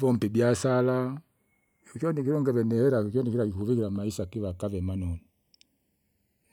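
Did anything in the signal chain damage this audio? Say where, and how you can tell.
Yes, there are channels drifting apart at the converter stage, throughout the speech. Two devices on separate clocks, roughly 70 ppm apart, let the inter-channel delay creep to under half a millisecond. In mono the comb notches sweep slowly, giving a gradual flanging. A fixed offset would sound static.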